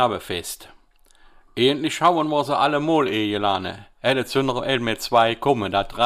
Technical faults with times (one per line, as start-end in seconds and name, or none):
5.15-5.50 hard clipping
6.03-6.05 hard clipping